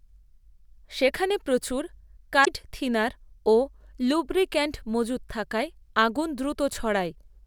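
A speech recording with one instance of damaged data in a compressed stream, from 2.41 to 2.48 s, right after "সেখানে প্রচুর". For roughly 60 ms the sound is disrupted. Here bytes of the encoded stream were lost or corrupted, so the decoder misread those frames, lost its place in the bitstream, and produced junk until it locked onto the next valid frame header.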